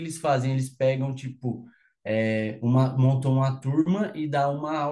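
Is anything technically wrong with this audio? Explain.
No, the speech signal shows no technical faults at any point.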